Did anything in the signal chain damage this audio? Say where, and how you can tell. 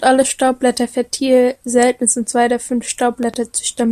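Yes, a loud pop at 3.23 to 3.36 s, just after "sind zwei der fünf": two sharp thumps about 5 dB above the speech, which carries on beneath them. That is likely an analogue-stage voltage jolt from a plug, switch or static. A dropout would leave a gap instead.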